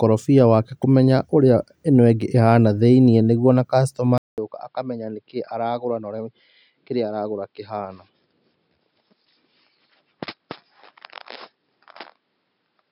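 Speech recording where the input likely switched to a poorer device at 4.18 s, after "nĩguo ona". A 0.2 s gap follows, then the sound stays dull to the end, with nothing above 5.3 kHz, roughly 10 dB quieter and over a faint new noise floor.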